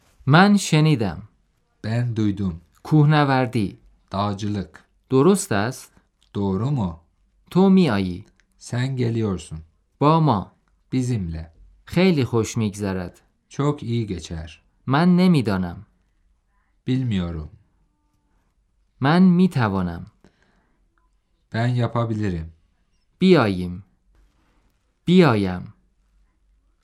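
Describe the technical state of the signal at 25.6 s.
Nothing goes wrong in the signal at 25.6 s, and the audio is intact at that point.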